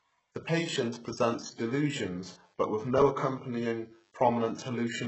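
Throughout the speech, the treble above the low band appears to be rebuilt rather than coded, likely from HE-AAC compression at a bitrate as low as 8 kbps. Copied-up bands misalign with true harmonics, so s sounds turn gritty and lispy, with nothing above 8 kHz.

From 0.98 s to the end, a nearby DECT cordless phone's 100 Hz radio bursts are being rectified by the audio circuit, producing DECT cordless phone buzz: a steady, thin, harmonic-rich buzz sitting faintly, far beneath the speech level.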